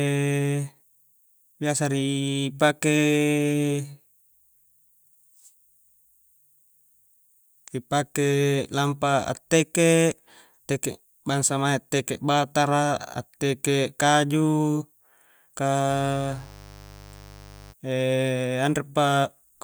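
A speech recording carrying mains buzz from 15.86 to 17.75 s: a raspy 50 Hz harmonic series, roughly 20 dB below the speech, from switching spikes leaking in through poor shielding or a dimmer.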